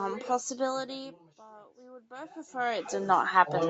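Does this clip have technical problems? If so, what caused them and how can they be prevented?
Yes. From 0.98 s until the clip ends at 3.69 s, the speech and the room noise behind it swell together, growing steadily louder. This is automatic gain rising: the input level fell by about 24 dB, so the automatic gain control raised its gain gradually to compensate, lifting the background along with the voice. A steady input level, with the microphone at a fixed distance and its gain set properly, avoids triggering this slow correction.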